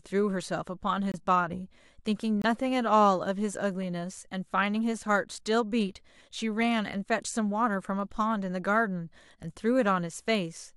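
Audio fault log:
1.12 s and 2.42 s, corrupt frame muted: the speech drops abruptly into silence for about 44 ms at 1.12 s and about 36 ms at 2.42 s, each gap consistent with a single lost compressed frame. Bit errors left those frames undecodable, so the decoder rejected them and the player filled each slot with silence. The surrounding speech stays in its original timing, so each hole is heard as a sharp, brief cut.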